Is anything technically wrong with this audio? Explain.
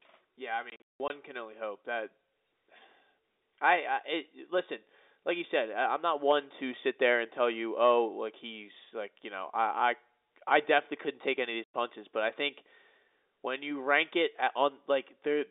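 Yes. There is packet loss filled with silence, heard twice in this telephone-band speech. From 0.7 to 1.1 s, about 260 ms drops out in scattered holes, the longest 180 ms. At 11.64 s a clean 100 ms gap follows. Lost packets were replaced with silence, and the hole sizes fit 20 ms packets.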